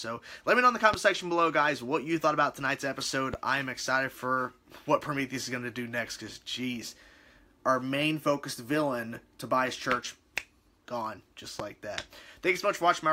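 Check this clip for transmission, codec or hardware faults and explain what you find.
Three loud pops stand out, at 0.94–0.96 s, 3.34–3.36 s and 11.60–11.62 s, each a single sharp hit lasting roughly 25 ms. The first jumps about 15 dB above the surrounding audio and the other two about 10 dB. The likely cause is a sudden voltage step from a switch, connector, static discharge or driver glitch, which the downstream circuitry shapes into a brief thump. The audio carries on underneath each one.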